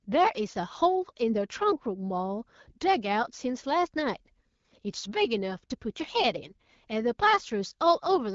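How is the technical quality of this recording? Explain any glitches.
No glitches or faults are audible anywhere in this recording.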